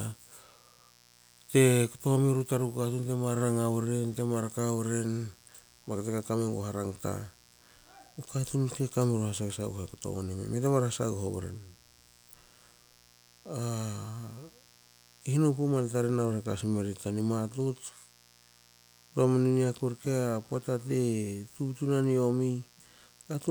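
Right from the start and running under all of the speech, there's a mains buzz tied to a 60 Hz supply, sitting roughly 30 dB below the voice. Sharp switching spikes twice per cycle stack up harmonics well into the kilohertz range, giving that constant raspy edge.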